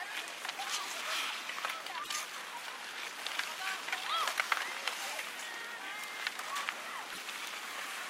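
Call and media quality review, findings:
Broken MP3 bit reservoir, 2.03–2.09 s and 7.12–7.18 s: audio skips ahead, then a roughly 64 ms disturbance. Likely cause: frames cut from an MP3 stream, so later frames draw reservoir bytes from the wrong frame; frames are 24 ms. Differs from packet-loss concealment: no smoothed fill, content lost outright.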